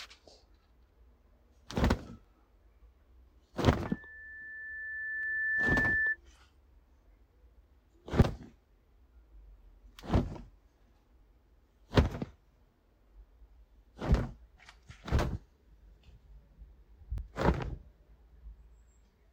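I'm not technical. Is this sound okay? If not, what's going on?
No. There are two problems.

First, audio missing between chunks. Tiny pieces drop out at 2.25, 5.23, 8.22, 14.19 and 17.18 seconds. Each gap is very brief, and the sound jumps straight across it. The spacing of about 3 seconds likely means the recorder saves audio in 3-second blocks and loses a sliver at each handover.

Second, a loudspeaker feedback squeal runs from 3.86 to 6.17 seconds. A microphone was hearing its own loudspeaker. One high tone, around 1.8 kHz, fed on itself. It swells over about two seconds into a whistle that sits above the sound.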